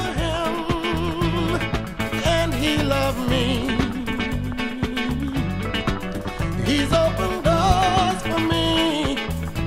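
A sudden voltage pulse, likely from a plug, switch, static discharge or driver glitch, lands on the signal twice: a loud pop at 2.80 to 2.83 s, about 10 dB above the sound, and a louder one at 7.70 to 7.73 s, about 15 dB above it.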